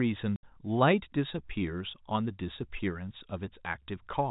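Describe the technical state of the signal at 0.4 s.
At 0.4 s the speech drops into a hard-edged hole of dead silence from 0.36 to 0.43 s. This is packet loss filled with silence: about 70 ms of audio never arrived, which fits seven 10 ms packets, and the receiver played silence instead. The narrowband G.711 telephone sound continues on either side.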